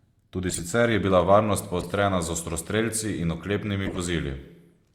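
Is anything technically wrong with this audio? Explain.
Yes. Corrupt frame decoded, three times: 0.49 to 0.60 s, just before "je bila", then 1.81 to 1.86 s, then 3.85 to 3.98 s. Damaged compressed frames were played anyway. Misread data puts energy at wrong frequencies, heard as brief chirps or noise bursts peaking around -15 dBFS.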